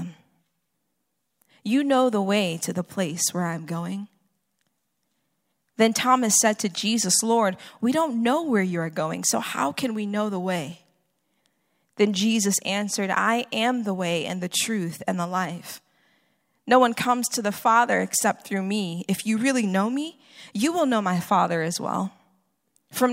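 Nothing in this recording of speech stands out as a technical fault; it just runs along without any glitch worth pointing to.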